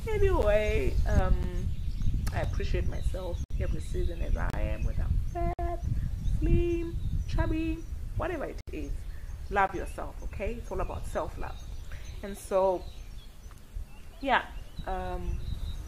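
Segment timestamps leave gaps between consecutive one-second stream segments, and the player fills each with silence. These gaps between stream segments cut hard-edged holes into the sound at 0.42, 1.43, 2.44, 3.44–3.51, 4.50–4.54, 5.53–5.59, 8.61–8.68 and 9.67 s, lasting about 4 to 69 ms.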